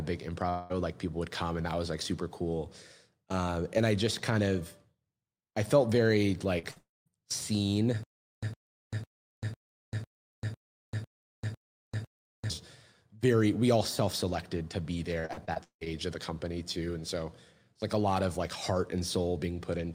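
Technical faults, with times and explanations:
0.49–0.74 s, long network dropout: About 0.2 s of audio never arrives just before "like people would come", likely from a network stall. The receiver stretches the last sound across the whole gap as a fading buzz, with no silence reached. The audio then resumes further on with that stretch missing. Unlike a short concealed loss, the gap is long enough for the fill to audibly decay instead of blending back in after a few hundredths of a second.
6.59–6.65 s, short concealed packet loss: Right after "I felt very", about 40 ms is lost, and the decoder fills it by continuing the preceding sound before blending back into the real signal. It comes across as a brief smear or wobble, not a gap. What separates it from a burst loss is its brevity: the fill is too short to fade, so nothing sounds held or dropped out.
6.71–6.78 s, burst of packet loss: About 60 ms is lost in one run, and the receiver holds the last sound for roughly 50 ms while turning it down. 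The result is a short held buzz or fading hiss before the audio jumps ahead. Its length puts it between a concealed tick and a full dropout: long enough to hear the fill sag in level, but the fill never gives way to silence.
6.78–7.08 s, long network dropout: Directly after that burst, about 0.28 s goes missing, likely a network stall. The last sound is continued and faded, then about 0.2 s of silence follows before the audio returns further on. This is distinct from the earlier burst because concealment runs out entirely, leaving audible emptiness. It is also distinct from a stutter, since nothing is replayed and no pattern repeats.
8.03–12.50 s, stutter with silent gaps: The same fragment of about 109 ms plays nine times, each followed by about 0.39 s of digital silence, repeating every 0.5 s. This likely comes from a stalled player retrying its last buffer. The even pace and dead-silent gaps set it apart from packet loss, where the fill fades and real audio resumes. 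Here, the identical burst returns at a fixed interval, and the audio due in that time is lost.
15.20–15.88 s, repeated packet loss (robotic sound): Between "self selected to be" and "of the company too", seven separate losses occur, the longest about 0.17 s, so roughly half this stretch is patched with continued sound. Each fill is followed quickly by another gap, giving a choppy quality with pieces missing. Unlike a single burst, the damage is spread over many closely spaced holes.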